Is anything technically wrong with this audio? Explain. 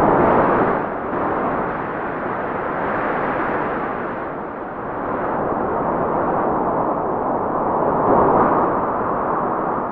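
Yes, there are two spots where compressed frames are skipped, at 2.18 s and again at 8.06 s. Each time, around ten whole frames of the encoded audio never get played, presumably lost from the file or rejected by the decoder. With 23.2 ms frames, which fits 1024-sample frames at 44.1 kHz, that's roughly a third of a second of sound just gone. At each join the sound lurches forward.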